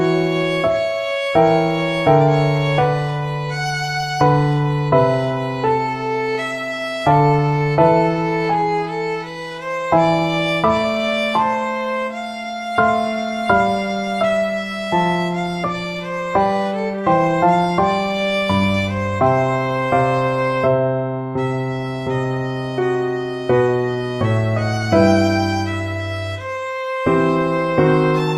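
No technical faults can be heard anywhere in the signal.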